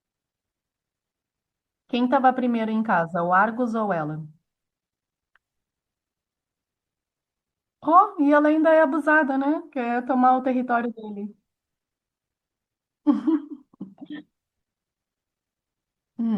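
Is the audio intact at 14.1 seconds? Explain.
No, likely MP3 compression, fitting a 64 kbps encode, drops weak frequency lines throughout, so the speech at 14.1 s sounds watery with chirpy s sounds.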